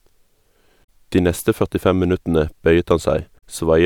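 Damaged data in a compressed stream affects this speech recording at 0.81 to 0.88 s and again at 3.35 to 3.44 s, each a short glitch lasting about 80 to 90 ms, where corrupted bytes make the decoder misread frames, lose sync and hunt for the next frame header.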